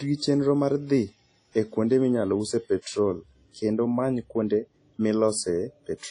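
It's a speech clip, and the whole thing carries a ringing, washy coding sound with hiss that swells and fades with the voice, and nothing at all above about 10.1 kHz. That's likely WMA compression at a low rate, something like 32 kbps, where the encoder drops weaker detail and lets noise smear across long blocks. There's also a pre-echo from 2.82 to 2.86 s: a short hiss runs about 44 ms ahead of a sharp onset, because noise meant for the loud attack fills the quiet gap before it, softening the hit.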